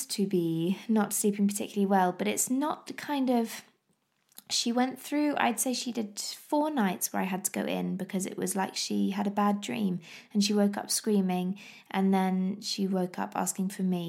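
No technical faults can be heard anywhere in the speech.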